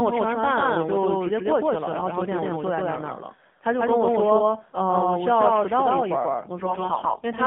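The whole clip carries a doubled audio track: a second, full-band copy of the speech trails the first by roughly 150 ms at about the same level, so everything sounds slapped back with no room decay. A slower second capture path is the likely culprit.

Also throughout is the AMR narrowband mobile codec. The line only passes about 150 Hz to 3.5 kHz. The voice has that buzzy, synthetic 2G-call quality, plainly audible, which fits AMR-NB running at a low mode around 7.4 kbps.

From 6.58 to 7.21 s come AMR bit errors. Flipped bits in the weakly protected parts of each frame push the excitation pulses and fine gain and spectrum values off. Pitch and loudness roughly hold, but the voice turns hoarse, scratchy and gargly, consistent with about 7 percent of bits arriving wrong.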